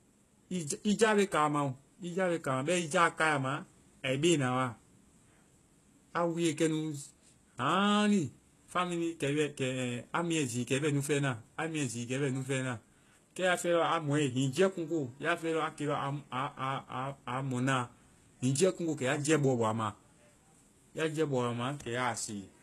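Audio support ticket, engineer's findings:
Throughout: plainly audible codec damage on speech, gritty, lispy sibilants and metallic treble; likely HE-AAC compression, spectral band replication rebuilding highs from copied lower bands, consistent with roughly 16 kbps. Spectrogram: repeated, blocky treble texture, nothing above 12.3 kHz.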